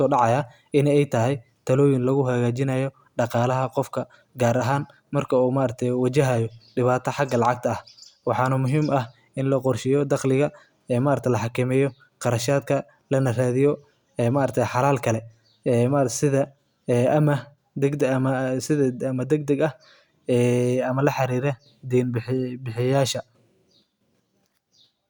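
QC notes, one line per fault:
No faults heard anywhere in the speech.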